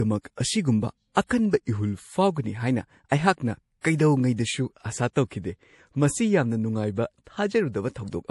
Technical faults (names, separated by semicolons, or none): low-bitrate audio saved at a high bitrate